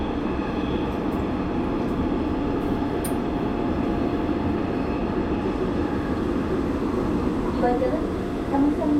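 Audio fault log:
No faults detected anywhere in the audio.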